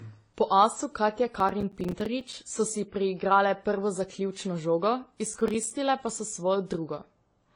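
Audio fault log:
Throughout: transcoding between lossy codecs. Nothing above 10 kHz, with smeared, layered artefacts that were likely left by two different lossy codecs in sequence rather than one.
1.40–2.33 s and 5.26–5.71 s: processor overload crackle. Gritty tearing ends just before "so si priigrale prvo" and "pa so". The many tiny silent gaps fit missed buffers of roughly 5 ms, unlike a single dropout.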